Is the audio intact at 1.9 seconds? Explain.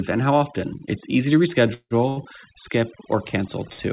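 No, 1.9 s falls inside a call audio freeze running from about 1.74 to 1.94 s, right after "easy to" and just before "skip or". The likely cause is late packets draining the jitter buffer, so the receiver stretched the last bit of sound into a fading buzz or hiss for about 167 ms, with roughly 70 ms of that going silent. When the audio resumes, nothing's actually lost; everything after simply lands about 167 ms later.

On top of that, overdone noise removal runs through the whole clip, including this moment. The reduction is set so aggressively that it's clamping down individual frequency bands whenever they sit near its noise estimate, and quieter parts of the speech get dragged down with them. That's why the background drops away and breaks up into little twinkly specks, over a call path that already tops out at 4 kHz.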